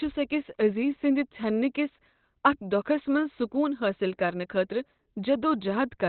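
Throughout the speech, the sound is muffled and hoarse, with nothing above 4.2 kHz. This is likely heavy Opus compression. The encoder appears to run in its narrowband speech mode, which fits a rate near 12 kbps. The upper bands are discarded entirely.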